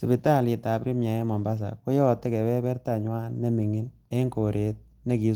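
Speech over Opus at 20 kbps in hybrid fullband mode, band reaching about 20.1 kHz, with no technical faults found.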